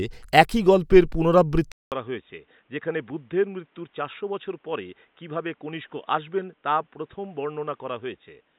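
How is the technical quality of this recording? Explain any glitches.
The recording has one fault, lasting from 1.72 s to the end. After a 200 ms silence, the speech drops about 10 dB, loses everything above 3.8 kHz and sounds dull and boxy over a new noise floor about 40 dB down. The likely cause is that the input switched to a poorer device with a narrower band and its own noise.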